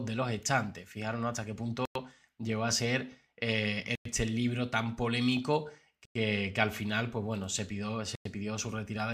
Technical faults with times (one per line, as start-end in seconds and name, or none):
1.85-1.95 gap between chunks
3.95-4.05 gap between chunks
6.05-6.15 gap between chunks
8.15-8.25 gap between chunks